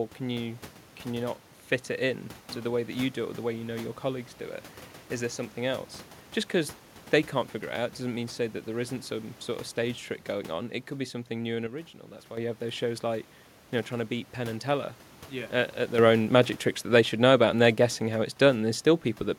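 Sudden gain jumps occur at 11.67 s and 15.98 s in this speech clip. At 11.67 s the level drops by about 8 dB for 0.7 s, returning at 12.37 s. At 15.98 s it rises by about 7 dB and stays there to the end. Both steps have no fade, and the background noise shifts with the speech, which points to a digital gain setting that was likely applied abruptly from one sample to the next.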